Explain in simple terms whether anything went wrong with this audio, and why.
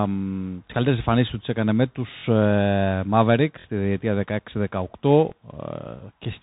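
The audio went through a Bluetooth CVSD headset codec, an old, narrowband phone-headset system that tracks the sound one tiny up-or-down step at a time. Nothing above about 3.8 kHz survives, so the speech sounds muffled, with a grainy hiss, scratchy s sounds and roughness on loud passages.

There is also a repeated buffer at 0.67–0.70 s, 3.60–3.65 s and 5.29–5.32 s. Fresh audio arrived late, so the device replayed its last chunk of about 23 ms. That chunk plays twice at the first and last spots, and three times in the middle. You hear each as a brief stutter or buzz, with a little audio lost.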